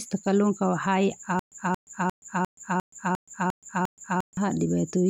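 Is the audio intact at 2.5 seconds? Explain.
No. At 2.5 s the speech sits inside a stutter with silent gaps running from 1.39 to 4.37 s: a 227 ms fragment repeats eight times, each followed by about 125 ms of digital silence. This is likely a stalled stream replaying its last buffer, so the intervening speech is lost.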